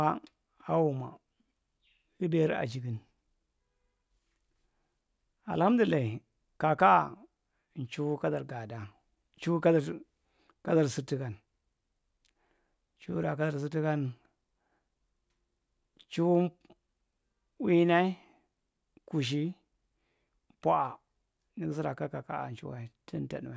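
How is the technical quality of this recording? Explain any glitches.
The technical quality of this recording is sound, with no glitches to explain.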